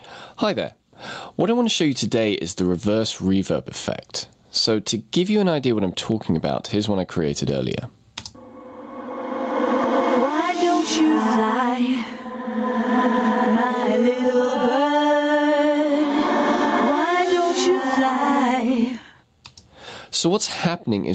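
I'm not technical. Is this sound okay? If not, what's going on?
No. Gain pumping runs through the whole clip: the level keeps surging and dropping, likely because the microphone is turned up too high and an automatic limiter pulls it back on every loud sound.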